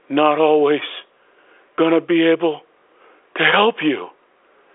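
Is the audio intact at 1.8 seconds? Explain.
No. At about 1.77 s there is packet loss with pitch repetition: roughly 20 ms of audio, which fits a single lost packet, was bridged by repeating the last pitch period. It sounds like a brief, slightly held buzz, not a silent gap or click.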